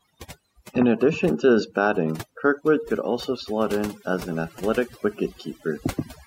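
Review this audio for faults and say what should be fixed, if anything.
Overdone noise removal runs throughout the speech. The reducer pushes individual frequency bands down or out whenever they sit close to its noise estimate, taking the quieter parts of the voice with them. This leaves near-silent gaps sprinkled with twinkling specks. To prevent it, set the reduction amount more gently and check the result by ear before committing.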